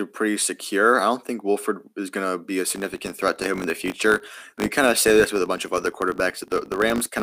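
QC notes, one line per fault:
2.66–7.23 s, filter restarted on every block: a 50 Hz buzz of small ticks rides under the speech to the end, rising and falling with its level. The filter restarts each block from silence, leaving a transient every 20 ms.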